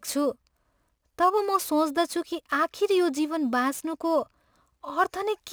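Throughout the speech, crude rate conversion adds a gritty, inharmonic fizz to loud and bright syllables. Samples are dropped or repeated, which fits a 48 kHz to 44.1 kHz conversion. The error sits about 25 dB down, and unlike steady hiss it disappears in pauses.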